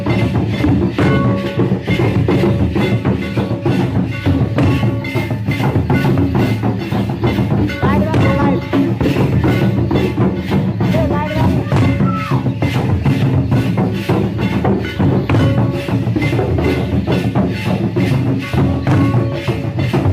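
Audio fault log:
No faults are logged for this audio.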